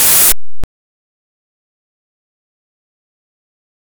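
Signed and unsigned mixed up, from 0.0 to 0.64 s: the opening of the audio bursts out as very loud, harsh distortion, with its quieter moments pushed up as loud as everything else. The likely cause is 16-bit samples read with the wrong sign convention, so the top bit flips and every pass through zero becomes a leap from one extreme of the range to the other.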